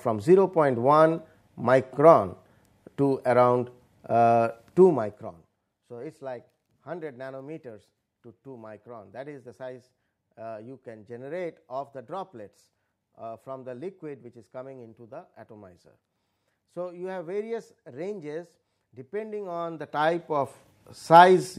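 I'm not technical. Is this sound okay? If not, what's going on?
No. There is zipper noise. From 4.81 to 5.63 s the volume falls sharply, and from 19.38 to 20.79 s it rises. It moves in tiny jumps, dozens a second, so you hear a fast ticking.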